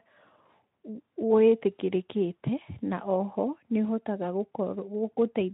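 No technical faults are audible.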